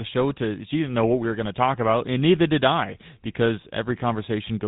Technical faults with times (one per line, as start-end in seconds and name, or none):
0.00-4.67 GSM full-rate codec